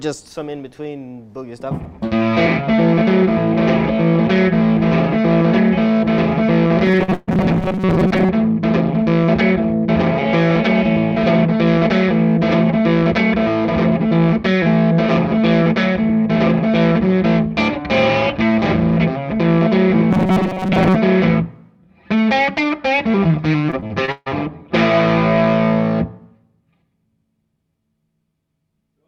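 From 6.86 to 8.29 s the sound takes on a rigid, metallic buzz at 188 Hz, the robotic sound from repeated short buffers. Audio likely arrived too seldom, so the playback looped tiny chunks of about 5.3 ms, which fits that pitch, and repeated roughly half of the stretch. On a spectrogram this shows as evenly spaced horizontal harmonics at multiples of 188 Hz. On the waveform it appears as a short cycle copied again and again.

Inside that stretch, at 7.03 to 7.10 s, a short concealed packet loss removes about 40 ms. The receiver extended the preceding sound to cover the hole and then blended back, which is heard as a brief smear or wobble. A spectrogram shows a short patch where the texture freezes and then rejoins.

Straight after, from 7.14 to 7.29 s, a burst of packet loss drops about 140 ms. The receiver stretched the last sound and faded it as the gap continued, with no true silence. 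The audio then resumes further along. On the waveform this looks like a tapering, repetitive envelope, and on a spectrogram like a smeared band that thins out before the sound picks up again.

From 20.11 to 20.95 s the same 188 Hz robotic buzz returns, again likely from playback looping a roughly 5.3 ms buffer, and this time most of the span is repeated. The spectrogram shows the same rigid harmonic comb, here covering most of the interval.

Between 23.71 and 24.28 s, repeated packet loss (robotic sound) produces choppy audio with pieces missing. There are five separate gaps totalling about 220 ms, and the longest is 144 ms, so 37% of the span is patched. Each gap is filled by continuing the previous sound. A spectrogram shows alternating blocks of frozen, repetitive texture and normal detail, and the waveform shows chopped, uneven segments.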